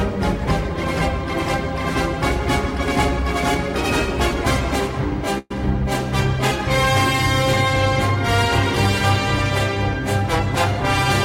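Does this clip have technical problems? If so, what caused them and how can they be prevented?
Yes. At 5.38 to 5.51 s there is a call audio freeze: the sound stalls for about 0.12 s, held as a short fading continuation of the last sound that ends in about 10 ms of silence, and then resumes exactly where it stopped. Nothing is lost, but everything after it runs about 119 ms late. This is likely a network delay spike that drained the jitter buffer, with the receiver stretching the last sound until packets arrived. A larger or better-tuned adaptive jitter buffer, along with prioritising call traffic, would prevent it.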